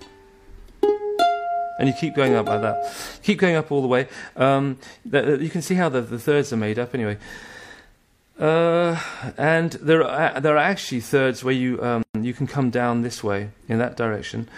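A brief dropout cuts into otherwise continuous sound at 12.03 s, lasting about 119 ms until 12.15 s, with smeared edges before the sound resumes exactly where it stopped. This is a gap at a join of encoded pieces: separately encoded segments were joined untrimmed, leaving encoder start delay and final-frame padding in the audio.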